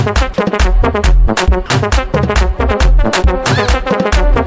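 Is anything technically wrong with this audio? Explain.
Yes. From 1.66 to 1.70 s, the voice detector likely mistook the signal for background and stopped sending. The receiver filled the 40 ms gap with comfort noise, so about 20 ms of sound drops out, replaced by brief steady noise or near silence.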